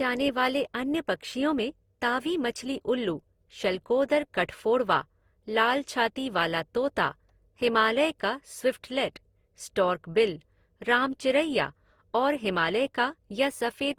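A speech recording that was likely decoded and re-encoded several times over, about four passes through a lossy codec, which fits Opus at roughly 48 kbit/s. This generation loss runs through the whole clip. Each pass requantises on a fresh frame grid, so the errors stack up. The result sounds swirly, smeared and hollow beyond what one encode at that rate would give, with consonant attacks blurred, though nothing lies above about 20.2 kHz.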